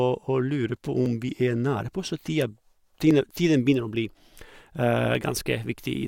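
From 1.06 to 5.15 s, periodic USB or driver dropouts skip about a millisecond every 1.02 s. These are evenly spaced ticks, unlike random glitches or clicks, and they are heard only over speech.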